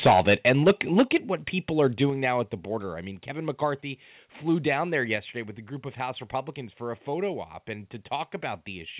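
From 0.01 to 1.02 s the speech has microphone overload. Peaks run about 11 dB past full scale, likely from excessive input gain, and a noticeable share of samples are flattened. The result is a harsh crackle on the loudest syllables. On the waveform this appears as squared-off tops, and on the spectrogram as smeared energy reaching upward.

The microphone volume steps down at 0.07 s by about 2 dB and at 1.08 s by about 6 dB. Each is an abrupt drop in level, likely the call software reducing input gain, and appears as a sudden narrowing of the waveform envelope.

A milder overload follows from 1.85 to 2.03 s, about 1 dB over, with only occasional clipped peaks. Further steps down come at 2.1 s, about 5 dB, and 5.16 s, about 3 dB. Throughout the clip, the G.711 call path leaves nothing above 4 kHz on the spectrogram.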